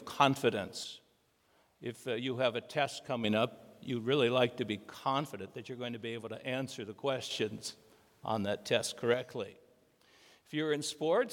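One channel drops out three times, at 0.84–3.24 s, 4.91–7.31 s and 9.14 s to the end: the sound abruptly falls by about 6 dB and then recovers after the first two, most likely because one stereo side went silent, halving the shared content in the mono sum.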